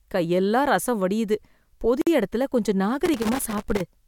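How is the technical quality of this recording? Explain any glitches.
The speech recording has two glitches: a brief dropout near the middle and a stretch of crackle near the end.

From 2.02 to 2.07 s a gap of about 53 ms opens in the speech, which then resumes where it stopped, with smeared edges. This is a gap at a join of encoded pieces: separately encoded segments were spliced without trimming the encoder's start delay and end padding.

From 3.05 to 3.81 s an irregular burst of crackle and scratching chops through the sound. This is loose connector crackle, caused by a worn or dirty contact repeatedly making and breaking the signal path as it shifts.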